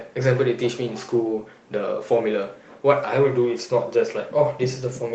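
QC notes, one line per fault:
No fault to note; the speech comes through the Opus call path as expected.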